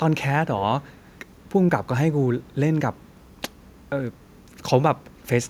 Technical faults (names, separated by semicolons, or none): echo leak